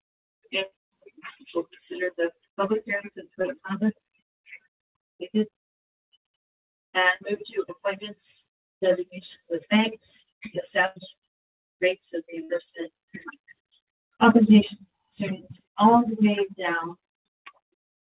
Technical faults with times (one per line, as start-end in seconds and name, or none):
0.66-0.73 burst of packet loss
3.42-3.46 short concealed packet loss
7.16-7.29 burst of packet loss
10.86-10.98 burst of packet loss
12.44-12.51 burst of packet loss